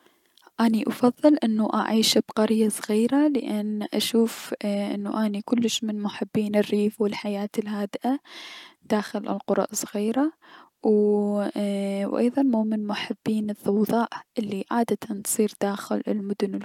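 No audible technical faults occur anywhere in the recording.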